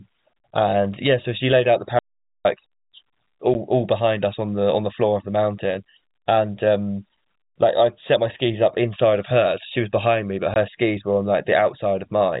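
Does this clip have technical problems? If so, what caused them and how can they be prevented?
Yes. Brief holes cut into the speech at 0.39 s and 3.54 s, each about 10 ms long, and again from 10.54 to 10.56 s for 20 ms. These are packet loss filled with silence. Packets went missing in transit and the receiver played nothing in their place. Each gap has hard edges, and the gap lengths fit one and two lost 10 ms packets. Prevent this with a jitter buffer plus packet loss concealment, forward error correction, or a less congested network path.

From 1.99 to 2.45 s the sound stops dead for about 460 ms. The gap is silent with no room tone, so whatever was said there is gone. This is an audio dropout to silence, likely caused by the input briefly disconnecting or being muted while recording continued. Secure cables and connections, check device power and mute settings, and monitor input levels during capture.

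The narrow telephone band of the G.711 A-law coding is audible throughout but adds no noticeable damage of its own.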